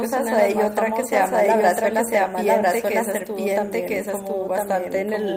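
Right from the start, the speech carries a doubled audio track. A second full-band copy runs about a second behind the first, at roughly the same level, so every phrase comes back over the next one like a flat, dry echo with no room tail. Because it never decays, it sounds like the same signal landed in the mix twice, most likely through a second, slower capture path.

Between 1.83 and 1.85 s there's a short lost packet rebuilt from error correction. The 20 ms stretch fits a single packet that went missing. The decoder filled it from the low-bitrate backup copy carried in the following packet, so nothing drops out. You hear a brief rough, grainy patch instead.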